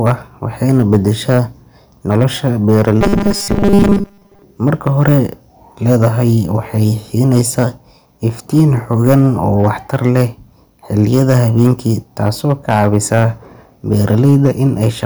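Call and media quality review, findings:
Hard clipping, throughout. Gain stage or converter driven about 7 dB past full scale; a small fraction of peaks cut flat. Flat tops add high harmonics: crackle on peaks of louder speech.

Robotic sound from repeated short buffers, 3.01–4.43 s. Likely cause: late audio delivery with concealment looping the last short buffer. Most of the real signal skipped; repeats impose a rigid 200 Hz metallic buzz, fitting a 5 ms buffer.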